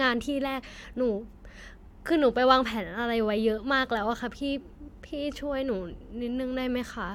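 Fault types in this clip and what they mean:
No technical faults can be heard in this speech recording. Nothing in the sound points to a problem with how it was captured or delivered.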